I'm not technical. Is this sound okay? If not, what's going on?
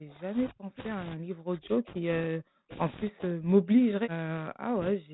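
No. From 0.0 to 2.71 s and again from 3.09 to 5.13 s the speech keeps sinking, at times almost to silence, then recovering. This is speech suppressed in double talk, likely from a call's echo canceller turning everything down while both sides talked at once.

Between 0.77 and 0.82 s a faint, brief scrap of echo slips through, a copy of the sound arriving about 0.29 s late. This is an echo leak, likely where a speakerphone's echo canceller failed to remove its own loudspeaker's output.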